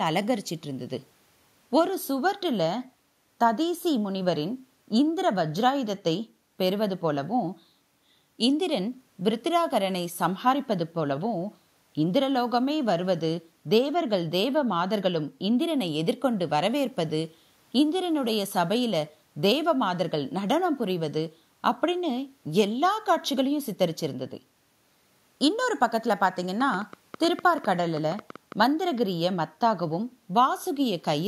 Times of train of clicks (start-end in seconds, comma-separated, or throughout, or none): 26.60-28.53